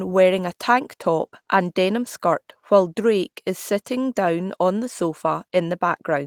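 Nothing in this speech recording stood out as a technical problem on listening.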